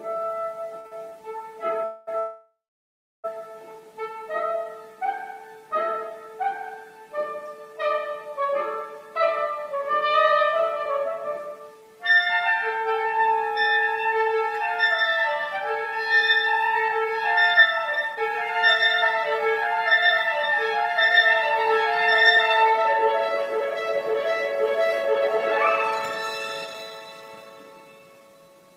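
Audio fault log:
0.79–1.13 s, repeated stalls (stutter): three short holds, longest 54 ms, as packets ran late and the buffer kept emptying; the last sound was stretched, nothing lost.
1.84–2.09 s and 2.19–3.26 s, call audio freeze: the sound hangs for 231 ms, then about 1.05 s, the second trailing into 690 ms of silence, likely an emptied jitter buffer. Nothing is missing.
9.51–25.37 s and 26.65–28.76 s, jitter buffer speed-up: the receiver trimmed tiny pitch-period slices to cut backlog, roughly a second then 0.4 s, so the sound hurries along at 106% and 117% with unchanged pitch.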